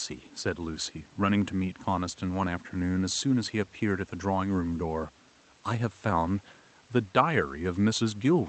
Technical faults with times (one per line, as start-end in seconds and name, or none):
none